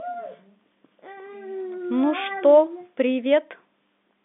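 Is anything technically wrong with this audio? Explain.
No, nothing here is a fault: the speech has the narrow telephone band of G.711 coding, roughly 200 Hz to 3.6 kHz with nothing above about 3.8 kHz, which is simply how a normal phone line sounds.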